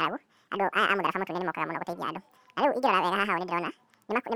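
From start to finish, the speech is read two samples at a time (double speed): the playback chain treats each pair of samples as one frame, as if the stream had two channels or samples twice as wide. Every stretch of sound therefore passes in half the time, running at 2x speed and shifted up a full octave, 12 semitones. The voice sounds hurried and chipmunk-like.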